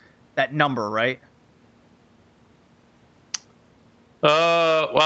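No faults are audible in the speech, which passes through the call microphone processing and a WebRTC call path with nothing above about 8 kHz, consistent with a wideband Opus setting.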